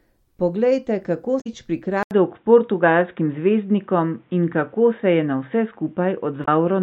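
At 1.37 to 1.47 s and again at 6.42 to 6.48 s, brief glitches break into the speech. This is damaged data in a compressed stream: corrupted frames make the decoder lose sync and jump to the next header. From 2.03 s, after an 80 ms gap, the voice turns dull and boxy with nothing above 3.8 kHz, a few decibels in level change and a faint new noise floor. The likely cause is the input switching to a poorer device.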